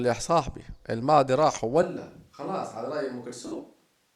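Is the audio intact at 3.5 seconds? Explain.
No. From 1.83 s to the end the sound turns roomy and hollow, about 10 dB quieter, with thinner bass and noise around 35 dB below speech, likely a switch to a distant microphone. On a spectrogram the low end thins and the noise floor rises. From 3.47 to 3.59 s, lost LE Audio frames appear: about 83 ms of gaps scattered over 120 ms, the longest run roughly 50 ms. The LC3 decoder repeats the last spectrum with random signs, smearing tones into noise, which shows as blurred, harmonic-free patches.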